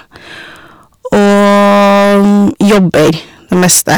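From the first moment to the end, the speech is hard clipped. It was pushed about 18 dB past what some stage in the chain could carry, so every peak gets sliced flat, and nearly a third of the waveform is sitting against the ceiling. Those squared-off tops throw energy well up the spectrum, so instead of occasional crackles you get a constant harsh fuzz riding on every loud syllable.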